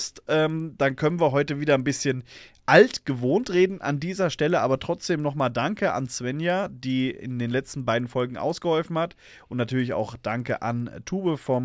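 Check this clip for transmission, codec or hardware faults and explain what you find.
One fault runs through the whole speech clip: the resampler restarted on every block. Each 100 ms chunk of the 24 kHz to 16 kHz conversion got converted on its own, so every block edge carries a small error. You hear it as a steady tick at 10 Hz, present only while there's signal.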